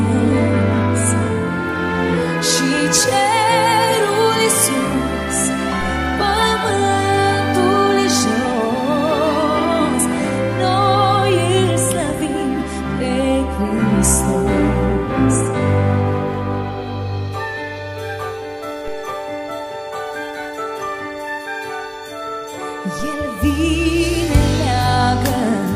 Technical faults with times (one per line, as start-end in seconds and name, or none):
18.88 DC step
23.00 DC step